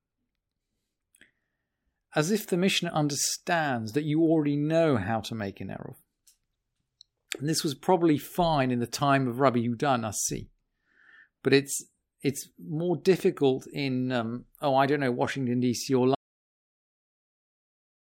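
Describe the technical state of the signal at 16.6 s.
At 16.6 s the speech has already cut out into silence, with no room tone underneath, and it stays silent from 16.15 s to the end of the clip. This is an audio dropout to silence, most likely caused by the input being lost while the recorder kept writing silence.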